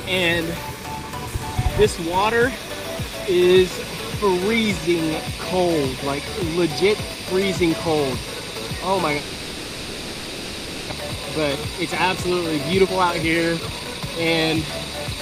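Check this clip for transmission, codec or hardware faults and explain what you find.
Two kinds of fault are present: a long stretch of concealed missing audio, followed by two bursts of accelerated playback.

Long network dropout, 9.17 to 10.93 s: for about 1.7 s the receiver likely had no incoming packets and filled the gap by extending the last sound into a fading buzz. Playback then resumes with about a second of audio lost, and the stream ends up running roughly 0.7 s behind.

Jitter buffer speed-up, 11.01 to 14.16 s and 14.63 to 15.16 s: once the delayed audio arrives in a rush, the buffer sits over its target. The receiver trims tiny pitch-period slices repeatedly to catch up. The first run plays at 118% speed and sheds about half a second. The second plays at 113% and sheds about 70 ms. In both, the sound is hurried while the pitch stays unchanged.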